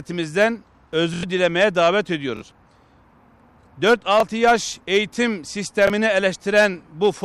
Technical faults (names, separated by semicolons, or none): repeated buffer